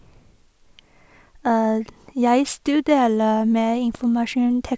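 No technical faults can be heard anywhere in it.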